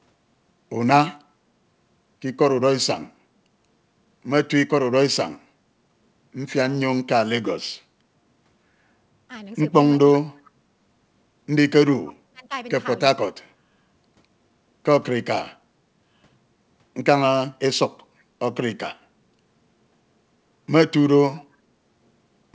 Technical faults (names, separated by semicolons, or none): speech suppressed in double talk